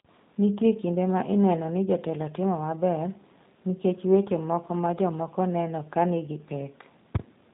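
Speech runs the whole way through with a dull, narrow, slightly rough and synthetic quality, nothing above about 3.8 kHz, which is the signature of the G.729 codec at a rate that fits 8 kbit/s. It rebuilds each 10 ms frame from a vocal tract filter, pitch predictor and sparse pulses, so the damage is plainly audible.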